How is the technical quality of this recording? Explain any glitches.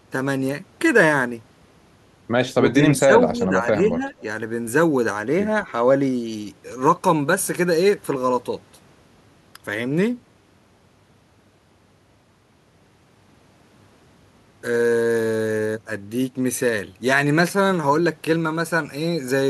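The recording has one glitch. From 2.52 to 4.13 s, speech is suppressed in double talk. The speech sinks by roughly 10 dB, for about a second in total. The likely cause is an echo canceller that heard both talkers at once and turned everything down. The speech dips, loses its high end or cuts out in pieces.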